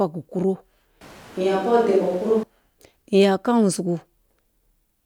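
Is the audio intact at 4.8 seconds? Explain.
Yes, the audio is intact at 4.8 seconds, with no audible fault at that moment.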